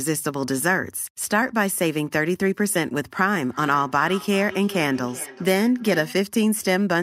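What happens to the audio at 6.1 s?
At 6.1 s the speech is shadowed by thinner, ringing copies returning roughly every 0.4 s, about 16 dB below the voice. This is feedback echo between two devices, running from 3.41 to 6.32 s: one device replays the other's sound, its microphone recaptures it, and neither echo canceller removes it.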